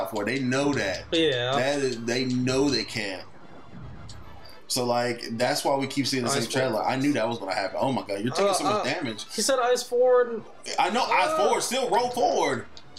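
Nothing here stands out as a technical fault; the audio runs along steadily with no problems to point to at any moment.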